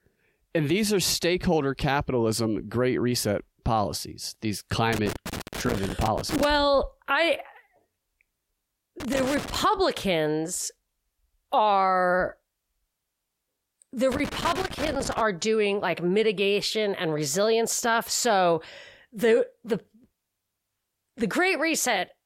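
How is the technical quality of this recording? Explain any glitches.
The speech is marred by loose connector crackle in three bursts: 4.93–6.45 s, 9.00–9.64 s and 14.12–15.21 s. A failing contact repeatedly opens and closes, chopping the signal, and any DC on the line adds pops. The waveform shows jagged dropouts and spikes, and the spectrogram shows scattered broadband vertical streaks.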